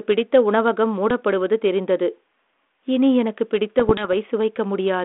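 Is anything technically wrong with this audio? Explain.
Yes. Bit errors on an ADPCM link, at 1.10 s just after "பிடித்த உணவகம்" and from 3.79 to 4.13 s, corrupt a small fraction of bits on the G.726 32 kbit/s path. Each flipped bit knocks the decoder's step size and predictor off track, causing brief pops, rough bursts and level jumps.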